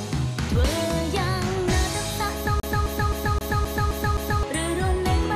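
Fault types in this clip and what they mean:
CD stuck on one turn: the laser jumps back a track each rotation, so a 0.26 s slice repeats seven times from 2.60 to 4.43 s, muted briefly at every jump.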